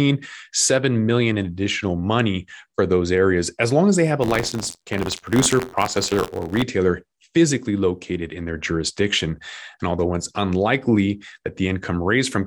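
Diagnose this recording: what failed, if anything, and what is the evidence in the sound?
Buffer tearing in the driver, 4.21 to 6.63 s. An 86.1 Hz buzz fits a 512-sample buffer. Writer and reader cross, splicing in slivers about 50 ms old.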